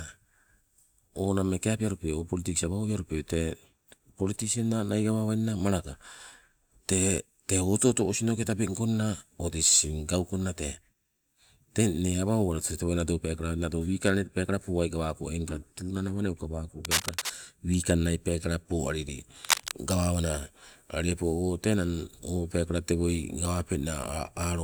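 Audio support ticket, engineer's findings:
Cable scratch noise, 16.85–17.32 s and 19.45–19.71 s. Dense, uneven crackle over the speech, roughly as loud as it. Likely a worn cable or connector moved, its contact resistance jumping.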